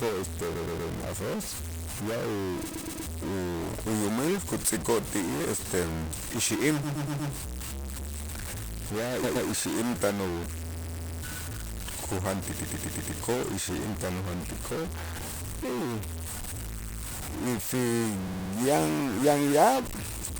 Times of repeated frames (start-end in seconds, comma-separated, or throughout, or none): 0.55-0.91, 2.69-3.05, 6.83-7.31, 9.23-9.47, 10.73-11.21, 12.55-13.15, 16.79-16.99, 18.27-18.51